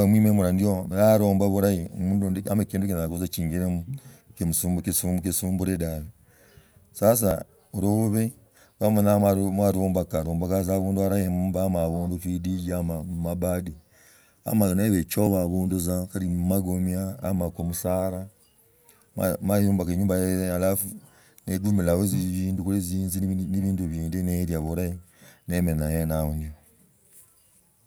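Brief skips cut the speech at 3.33 s, at 7.31 s just before "lubsbi mwaluumbuka luombokaa tza", at 15.27 s after "ama niba", and at 23.23 s after "guli jinzi". Each drops roughly 20 ms, spaced in multiples of 4 s: likely audio missing between chunks, lost at each 4-second chunk changeover.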